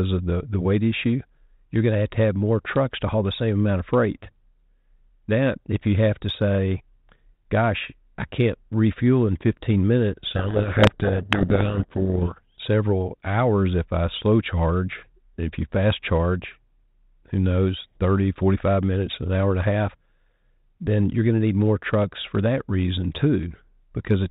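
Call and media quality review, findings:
Speech buried in harsh distortion, 10.28 to 12.32 s; clean decoding resumes after. Probable component: G.726 decoder at the receiving end. Codec payload misread: the decoder unpacks each code word in the wrong bit order, so the adaptive predictor is driven by wrong difference values, which fits a bit-order mismatch in the G.726 packing. Outside that window, 32 kbit/s G.726 band-limited sound with light coding damage.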